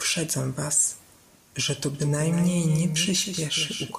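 At 1.94 s, right after "was że to", a doubled audio track begins and runs to the end. A second, clearly quieter copy trails about a fifth of a second behind. It cuts in abruptly, with no decay. A slower duplicate capture path is the likely cause.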